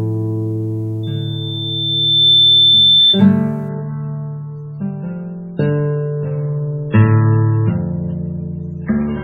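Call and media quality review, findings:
Loudspeaker feedback squeal, 1.03 to 3.26 s. A single 3.5 kHz tone rises out of the music over about a second and a half and peaks at roughly 10 dB above it. Probable component: the mic-to-PA loop, with gain above one at that frequency. It differs from a steady interference whistle because the tone grows by itself before it stops.

Adaptive stream at a lower bitrate, 3.69 s to end. The music switches abruptly to a dull, swirly sound with nothing above 6.9 kHz, which fits an MP3 rendition dropping from 128 to about 16 kbit/s. Probable component: the player's bitrate adaptation after throughput fell. It differs from a buffering dropout because there is no gap, only a sudden loss of quality.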